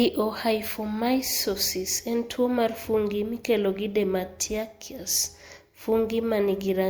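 Speech recording with no technical faults detected anywhere in the clip.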